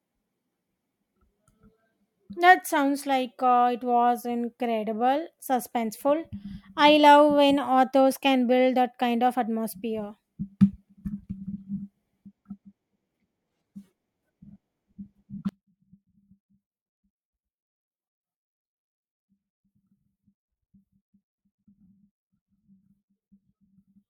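At 15.49 s the speech suddenly collapses to about 29 dB quieter and stays that way until the clip ends near 24.1 s. What remains is a faint copy of the voice. The likely cause is one channel inverted: with one stereo side's polarity reversed, the centred voice present equally in both channels cancels when they are summed to mono, leaving only their small differences.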